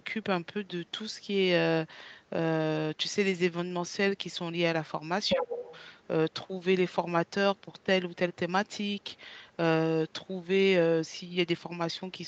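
From 5.28 to 5.87 s a second voice cuts in at roughly the same loudness as the talker, most likely the other side's voice leaking through from the loudspeaker past an incomplete echo canceller. It sounds like two people overlapping. On a spectrogram a second set of harmonic stripes, with its own pitch contour, lies over the talker's, all of it stopping at the call path's normal 8 kHz ceiling. The leak itself causes no drop in level on the waveform; it adds a second voice as strong as the speech.

Inside that overlap, from 5.38 to 5.7 s, the talker's own voice is pulled down by roughly 15 dB at its deepest for about a third of a second. This is speech suppressed in double talk: with both sides active, the canceller likely could not tell its talker from the echo and attenuated everything. It sounds like a sudden duck or a muffled gap in the talker's voice. The waveform envelope dips sharply, and on the spectrogram the talker's harmonics fade.

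A second brief leak follows at 6.03 to 6.07 s. It is very faint, around 40 dB below the speech and barely audible, and shows as a faint smear on the spectrogram with no visible effect on the waveform.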